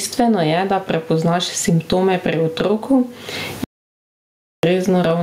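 Gain pumping runs through the whole speech clip, with a swing of around 20 dB. The likely cause is input gain set far too high, with a fast limiter clamping every peak and squashing the dynamics.

From 3.64 to 4.63 s there is an audio dropout to silence. The speech cuts off mid-flow and leaves just under a second of silence with no room tone, then resumes. That stretch of speech is lost. The likely cause is a briefly lost input while the recorder kept writing zeros.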